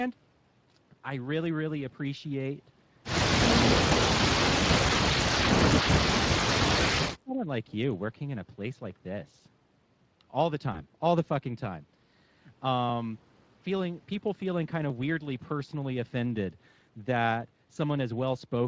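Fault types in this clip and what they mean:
Speex codec: A CELP speech codec whose coding damage is plainly audible across the whole clip. With too few bits for the excitation signal, the speech takes on a noisy, hoarse texture rather than clean voicing. The amount of roughness fits a Speex setting of about 20 kbps. The audio reaches up to 8 kHz.
VoIP packet loss concealed by the speech codec: Two short gaps were bridged by the decoder. It repeated its last pitch and filter state and let the gain fall frame by frame. At 3.89 to 3.93 s and at 10.73 to 10.83 s the speech briefly smears into a fading buzzy tone or coloured noise. Each event fits a single lost 20 ms frame. The voice stays weak or distorted for a short while after each, because the decoder rebuilds its state over the following frames.
Speech suppressed in double talk: The talker's level drops steeply in two stretches. From 4.14 to 6.16 s the speech is pushed down by up to around 35 dB, in pieces totalling roughly one and a half seconds. 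From 7.02 to 7.48 s it dips by up to around 25 dB for a bit under half a second. The likely cause is an echo canceller that could not separate this talker from far-end echo during overlapping speech, so it attenuated both.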